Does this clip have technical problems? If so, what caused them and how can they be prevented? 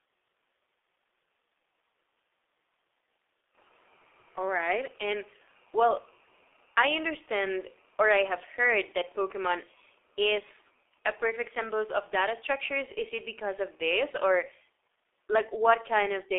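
Yes. Throughout, the speech passed through a G.723.1 codec, with a band of roughly 300 Hz to 3.6 kHz and a sound that fits about 6.3 kbit/s. Its slow, coarse frame-by-frame voice model leaves the speech muffled and hoarse, with smeared consonants. To prevent this, use a wideband, higher-bitrate codec such as Opus or G.722 at every stage of the call path.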